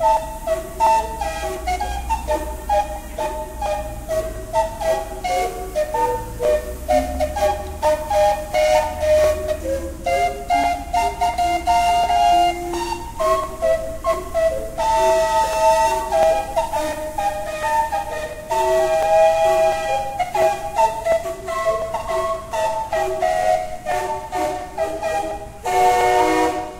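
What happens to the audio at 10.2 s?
A click lands every 0.70 s, from 0.17 s through 26.71 s, so 10.2 s sits inside this regular ticking. These are clock drift buffer slips, likely from two devices' clocks disagreeing by roughly 500 ppm, dropping or repeating about 15 samples at each slip.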